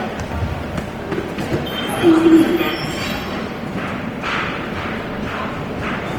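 Throughout, the audio has likely gone through Opus compression in its music (CELT) mode at a low bitrate, consistent with about 24 kbps. Short of bits, the encoder fills bands with folded or noise-like content, so tones sound plainly grainy, rough and noisy. The full bandwidth, reaching 20.2 kHz, remains.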